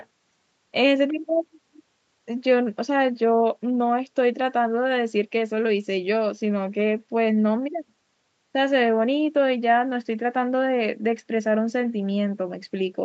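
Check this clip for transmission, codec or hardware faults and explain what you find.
No faults detected.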